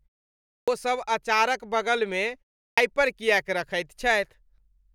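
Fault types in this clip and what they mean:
Clipped start after a pause: the output device goes idle in silence and is slow to wake, so speech resuming at 0.57 s and 2.66 s loses its first 106 ms and 115 ms. The waveform jumps abruptly from flat silence into speech, and the spectrogram lacks the onsets' opening energy.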